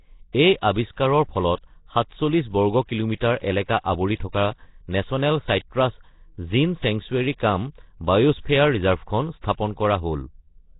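From start to finish, the speech carries heavy codec damage. It sounds like Nellymoser compression, likely from the old Flash microphone codec at a low rate, which fits about 16 kbps. Nothing is heard above 3.9 kHz. The codec works on short blocks with very few bits per sample. Quiet bands get no bits and are filled with noise instead. So the speech wears a rough, hissy halo. It also sounds smeared and underwater.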